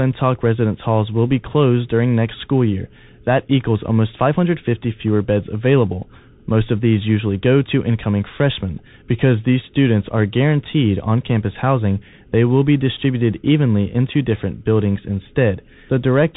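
Speech that sounds narrow and boxed-in from start to finish, with nothing above about 3.8 kHz, a fine granular hiss running underneath, scratchy s sounds, and roughness on louder, brighter moments: the plainly audible signature of the Bluetooth CVSD headset codec. CVSD codes each sample as a single up-or-down bit at a high rate, fitting a 64 kbps link, with an adapting step size. Fast, loud high content outruns that step and distorts, while the constant stepping leaves the grainy noise floor.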